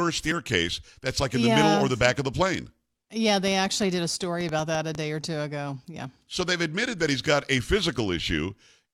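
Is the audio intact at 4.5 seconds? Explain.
No. At 4.5 seconds the speech is overlaid by a train of clicks running from 3.48 to 4.96 s: about ten sharp, similar ticks at roughly 6.1 per second, spaced unevenly and standing out about 10 dB above the speech. The near-identical shape of each pulse and the repeated clicking over a second and a half point to a likely external source, such as interference from nearby equipment or a faulty connection or power supply injecting repeated pulses into the signal.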